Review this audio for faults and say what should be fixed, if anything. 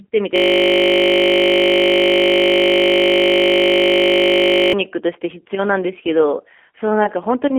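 From 0.36 to 4.73 s, a system hang loop replays one 20 ms slice. It repeats at 50 Hz, producing a steady buzz. Keep the audio thread from stalling, and mute output on buffer underrun.

Throughout, the G.729 codec damage is plainly audible. The speech sounds rough and synthetic. Nothing passes above 3.5 kHz, which fits an 8 kbit/s G.729A link. Use a wideband codec instead.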